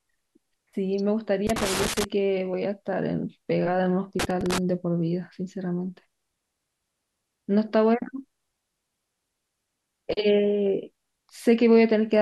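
From 1.47 to 2.04 s, the speech breaks into an irregular burst of crackle and scratching. This is loose connector crackle. A worn or dirty contact is making and breaking as it shifts. Each break chops the signal, and the crackle has no steady rhythm. The same fault returns from 4.20 to 4.58 s. This burst is shorter, at under half a second. It has the same rough, scratchy, stop-start texture.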